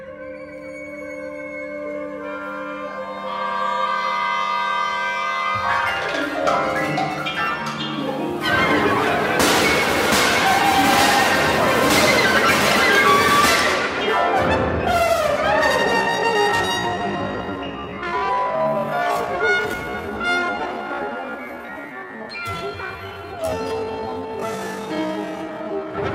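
At 15.91 s the pace suddenly drops to about half speed, 0.53 times, and stays there until 25.97 s. The pitch does not fall with it. This is a time-stretched section, likely from software repeating short slices to fill extra length. It sounds dragging.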